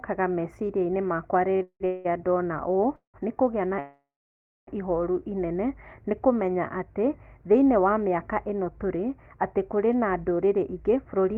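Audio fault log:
1.53–2.07 s, repeated stalls (stutter): four short breaks in 0.53 s, the longest 185 ms, with about 412 ms of that span, or 77%, filled in rather than played. Packets kept reaching the receiver late, so its jitter buffer ran dry again and again. Each time it stretched the last sound to cover the wait and then carried on. Nothing is lost, but the sound drags and stumbles forward.
2.96–3.16 s and 3.80–4.69 s, call audio freeze: the sound halts, hangs as a held, fading continuation, then drops to silence before resuming exactly where it stopped. The first lasts 181 ms, with 130 ms silent. The second lasts 874 ms, with 620 ms silent. This is likely packets held up in transit emptying the jitter buffer. The receiver extended the last sound until it faded out, and the overall delay grew by the length of each gap.
10.44–11.33 s, jitter buffer speed-up: the final stretch runs at about 107% speed with no change in pitch, so it sounds slightly rushed. 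The jitter buffer was holding more audio than its target. To bring the delay back down, the receiver cut many short pitch-period-sized slices, about 70 ms in all. Pitch stays the same while the timing tightens.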